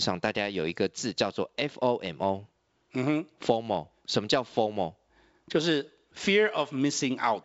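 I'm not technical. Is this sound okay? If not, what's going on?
Yes, nothing stood out as a problem when listening to this speech.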